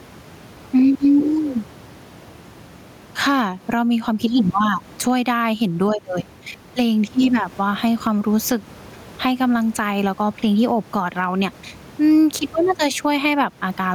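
Gain pumping runs through the whole clip: room noise sits about 31 dB under the speech, swelling in pauses and ducking roughly ten decibels under loud syllables, likely from input gain set too high into a fast limiter.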